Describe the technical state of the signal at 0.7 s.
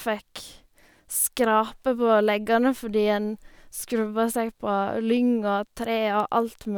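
At 0.7 s the speech signal is intact, with no dropout, clipping, distortion or other fault.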